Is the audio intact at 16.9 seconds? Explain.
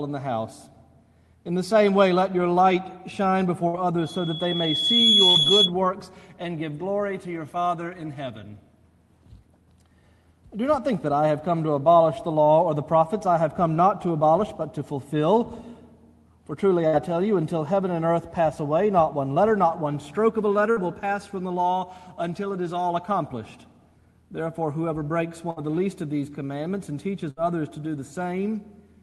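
No, a burst of packet loss runs from 16.87 to 16.96 s. Several consecutive packets arrived too late or not at all, so the receiver stretched the last decoded sound for about 57 ms, letting it fade into a held buzz or dimming hiss. Playback then picks up roughly 60 ms further along, so that stretch of the original audio is simply gone, leaving a brief smeared hold followed by a small jump forward.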